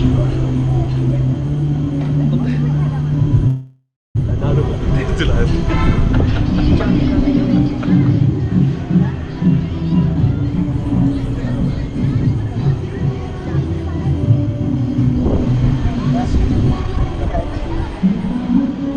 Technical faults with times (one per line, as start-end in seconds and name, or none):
3.47-4.17 call audio freeze
9.82-10.24 jitter buffer speed-up
12.03-12.83 jitter buffer speed-up
14.75-18.91 jitter buffer speed-up